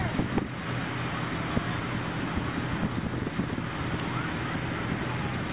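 No dropouts, clicks, distortion or timing glitches turn up anywhere in the recording.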